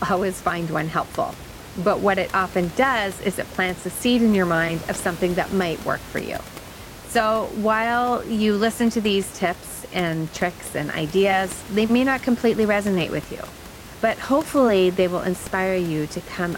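Listening through this recording of speech, nothing stood out as a technical problem, with only low background noise from the room sitting about 17 dB beneath the voice.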